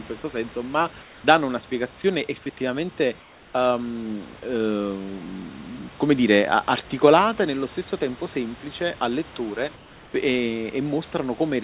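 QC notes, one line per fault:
0.22–0.24 s, sound dropped by the voice detector: a tiny 20 ms stretch where about 10 ms of the real sound disappears into flat, steady noise before the signal comes back. The likely cause is the sender's voice detector mistaking that brief low-level moment for background. It stopped sending, and the receiving end filled the hole with comfort noise until the detector triggered again.
1.02–1.24 s, 3.20–3.54 s and 9.76–10.14 s, comfort noise in place of the background: in the pauses after "senso ma" (speech picks up again on "una spiegazione effettivamente um"), after "una spiegazione effettivamente", and after "tempo semplice al lettore", the room tone turns into a smooth, featureless hiss for 220, 340 and 380 ms. That hiss sits about 2 to 3 dB below the real background, which itself is some 25 to 28 dB under the loud parts. The likely cause is the sender dropping into discontinuous transmission and the receiver synthesising roughly shaped noise for the gap. 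The call path cuts everything above 4 kHz.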